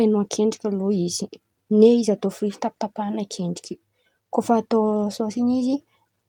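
No technical faults are audible.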